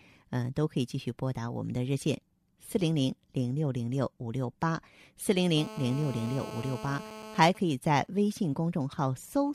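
From 5.57 to 7.40 s there's GSM phone buzz, a raspy 217 Hz rasp about 13 dB under the speech, from a nearby phone's call bursts getting rectified. Then, from 7.48 to 9.50 s, GSM signalling bursts take over: faint, even ticks with a longer buzz twice a second while a phone's user goes quiet in a call.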